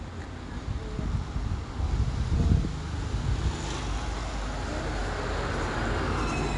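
From start to finish the audio carries 4-bit ADPCM compression: each sample is coded as a coarse step from a predicted value, so the quantisation error rides along with the signal as a gritty, level-following hiss on every loud passage, with roughness on sharp attacks. The damage is plainly audible. A spectrogram shows a raised noise floor tracking loud moments and nothing above 10.6 kHz, which fits a low sample rate and a stream of about 89 kbps.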